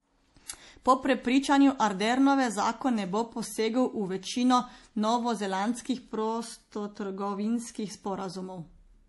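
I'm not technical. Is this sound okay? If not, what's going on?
No. All the way through, the speech sounds watery and swirly, with a treble cut-off at 11.5 kHz. It's likely heavy MP3 compression, not plain muffling, because s sounds shimmer and chirp.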